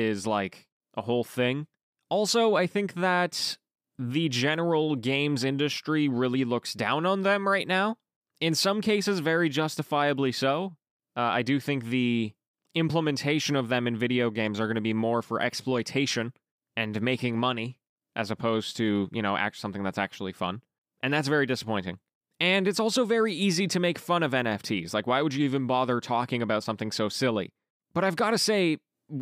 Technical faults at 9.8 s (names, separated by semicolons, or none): none